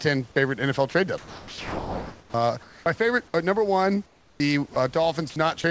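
Around 0.90 to 0.94 s and again from 1.18 to 2.34 s, the speech drops out into flat, steady hiss. That's sound dropped by the voice detector, most likely because the sender mistook the sound for background and stopped sending, leaving the receiver to fill in with comfort noise. The long gap swallows most of that second stretch.

From 2.62 to 2.86 s you get comfort noise in place of the background. The room's real texture turns into a smooth, featureless noise about 1 dB quieter, likely because the sender went into discontinuous transmission during the pause.

Then at 3.32 to 3.34 s, right before "number one", there's an onset clipped by the voice detector. Roughly 20 ms of the start is missing, likely because the detector was slow to notice the sound starting again, so the phrase snaps in with no soft lead-in.

After "number one", from 4.06 to 4.40 s, the background swaps to comfort noise again. 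This time it's about 3 dB down and blander, likely because the sender paused transmission when it heard no speech.

Finally, brief dropouts at 4.74 to 4.76 s, 5.30 to 5.36 s and 5.62 to 5.64 s each chop a sliver of sound into steady noise. These are more sound dropped by the voice detector, likely because it took the sound for background.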